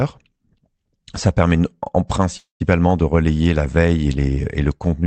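Speech that hits a call audio freeze from 2.37 to 2.62 s. The sound stalls and the last bit gets stretched into a fading buzz, with about 140 ms of that quarter-second going silent. Then it resumes right where it left off, so nothing's lost and everything after just runs roughly 0.23 s late. That's most likely packets held up in transit, draining the jitter buffer. The top end stops around 8 kHz, as you'd expect from Opus at a call bitrate in the 32 kbps range.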